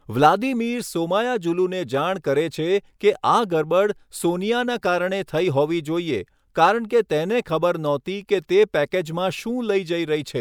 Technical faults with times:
none

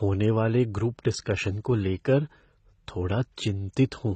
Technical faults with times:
0.00-4.15 transcoding between lossy codecs

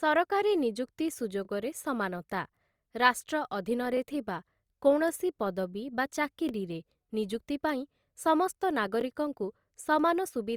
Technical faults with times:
1.45-1.47 overlapping chunks
3.97-3.99 overlapping chunks
6.49 overlapping chunks
9.01 overlapping chunks

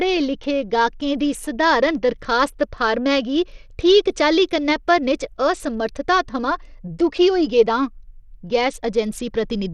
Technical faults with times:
0.00-9.73 Bluetooth SBC compression

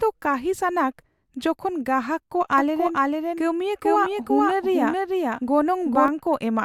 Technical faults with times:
2.58-6.08 doubled audio track

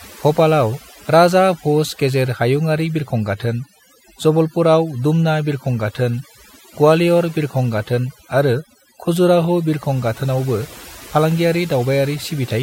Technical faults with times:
0.00-12.62 overdone noise removal

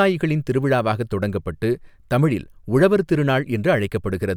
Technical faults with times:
none

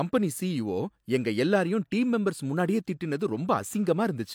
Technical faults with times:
none

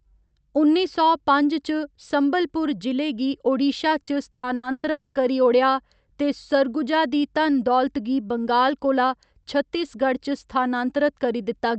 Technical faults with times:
4.03-4.86 repeated packet loss (robotic sound)
4.91-5.18 long network dropout

